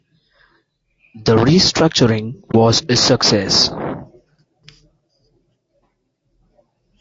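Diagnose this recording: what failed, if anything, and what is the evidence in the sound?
Codec stage: rough, grainy speech throughout, with noise filling gaps between harmonics and a thin top band, likely low-delay AAC compression at a bitrate near 32 kbps. A spectrogram shows smeared harmonics.

Network or decoder stage: AAC frame loss with muting leaves a brief dip from 2.51 to 2.55 s, just before "a success", consistent with one lost frame. The waveform fades out and back in over about a frame.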